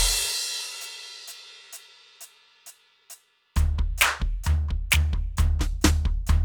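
Music, with no audible technical faults anywhere.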